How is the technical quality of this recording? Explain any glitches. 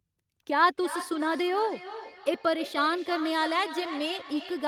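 From 0.71 s to the end, the speech keeps coming back as a thinner, ringing copy roughly every 300 ms, peaking about 11 dB below the voice. This is feedback echo between two devices: a second device in the room replays the call, and this microphone recaptures it.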